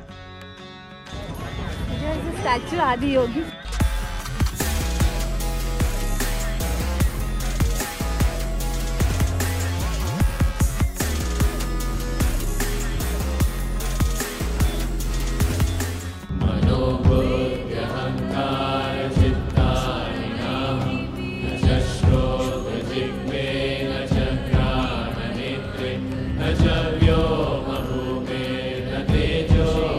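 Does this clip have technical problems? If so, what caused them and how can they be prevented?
Yes. CD scratch ticks: four brief ticks between 26.64 and 27.21 s, each under a millisecond, where a surface blemish exceeded error correction on successive disc rotations. Clean or resurface the disc, or rip in a secure mode that re-reads damaged sectors.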